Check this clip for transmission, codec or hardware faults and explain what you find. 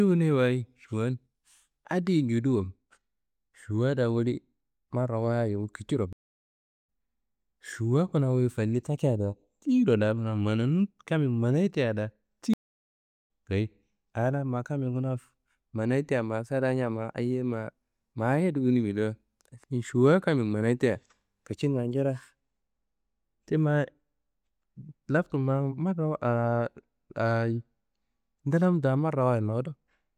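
Two stream reconnect faults interrupt this speech. After "da woli marrawayit kiciro", the audio drops out from 6.13 to 6.87 s (about 0.74 s), and after "tea da" from 12.54 to 13.28 s (about 0.75 s). Each time the connection broke, the player went silent, then reconnected with a fresh decoder. Speech resumes at a later point in the stream, roughly half a second on at the first gap and roughly 0.7 s at the second, so material is skipped.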